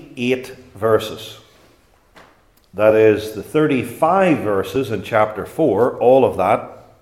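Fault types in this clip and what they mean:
Audio missing between chunks: At 4.76 s the sound skips forward, losing about 20 ms, with the two sides butted together and no silence between them. The likely cause is a recorder working in 3-second chunks and dropping a sliver at the handover.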